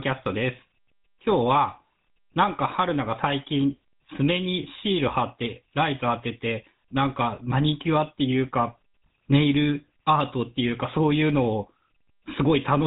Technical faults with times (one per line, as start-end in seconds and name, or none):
0.00-12.86 GSM full-rate codec